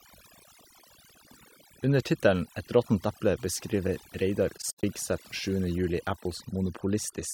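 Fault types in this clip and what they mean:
overdone noise removal: A noise reduction stage set far too aggressively has been applied across the whole clip. Frequency bands that sit close to its noise estimate are pushed deep down or switched off, and the quieter components of the speech are removed along with the noise. The result is a background that drops and breaks up into twinkling, warbling specks.
AAC frame loss with muting: Between 4.57 and 4.83 s the audio drops out in soft-edged holes. The decoder has replaced missing AAC frames with zeroed spectrum, and the overlapping transform windows fade the sound out and back in around each gap. Roughly 150 ms of audio is missing, scattered across a 0.26 s stretch, which points to about seven lost frames. The longest continuous gap is around a tenth of a second.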